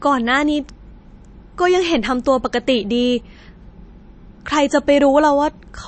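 Speech, with MP3 compression damage plainly audible across the whole clip. The treble stops dead at about 8.3 kHz, so sibilants sound dull and clipped at the top. Below that, weak spectral detail flickers in and out between frames, giving the voice a watery, swirly texture with metallic chirps on s sounds and smeared consonant onsets. The damage is most likely from a starved MP3 encode, consistent with a low bitrate of around 36 kbps.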